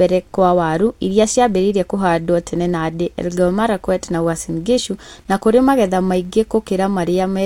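A speech recording with a filter restarted on every block, all the way through. The filter loses its state at each 10 ms block boundary, so every block opens with a small click, giving a 100 Hz buzz that rises and falls with the speech level.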